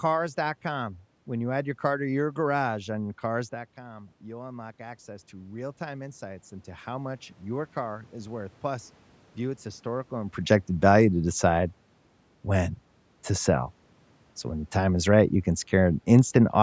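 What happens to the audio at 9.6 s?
Automatic gain rising runs from 2.99 s to 10.39 s, after "car to your garage" and before "value to decide". The input fell by about 14 dB, so the gain control slowly added about 11 dB, and at 9.6 s voice and room noise are still swelling together.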